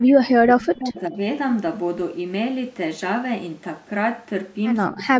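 From 0.02 to 1.2 s the speech sinks and breaks up, at worst falling around 40 dB, then dips again by some 25 dB from 4.92 s to the end. This is likely speech suppressed in double talk: the echo canceller mistook overlapping talk for echo and turned it down.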